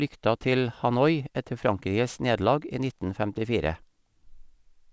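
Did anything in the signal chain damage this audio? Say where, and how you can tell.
Yes. The damage is aliasing, introduced at a sample-rate conversion stage and present for the whole clip. Sibilants sound gritty and metallic, and energy runs hard up to an 8 kHz edge, which fits a drop from 48 kHz to 16 kHz without an anti-alias filter. Content above 8 kHz folds back as false tones, roughly 30 dB below the speech. A clean band-limit would just sound dull, but this adds spurious, unrelated high frequencies.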